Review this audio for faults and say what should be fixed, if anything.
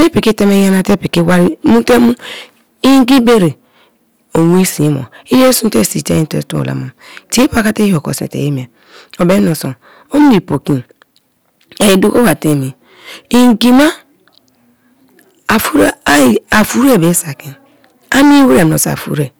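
Hard clipping runs through the whole speech clip. The signal is driven about 18 dB too hot, so roughly a tenth of samples are flattened, producing harsh fuzz on every loud syllable. Fix it by lowering input gain at the first stage so peaks stay below full scale.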